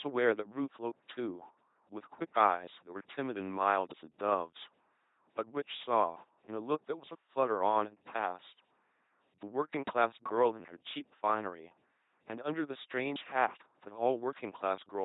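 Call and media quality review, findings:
LPC-10 vocoder, throughout. Buzzy, mechanical robot speech with misplaced buzz and hiss. Each frame excited by pulses or noise, never both, through a ten-pole filter. Nothing above 3.9 kHz. Heavy damage, which fits a 2.4 kbit/s link.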